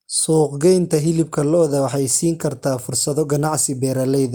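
No technical faults are audible anywhere in this speech recording.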